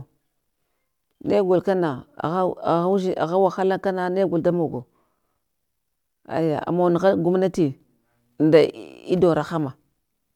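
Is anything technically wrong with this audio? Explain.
No, nothing technically wrong turns up here; the speech comes across steadily the whole way with nothing that points to a fault in the recording or playback chain.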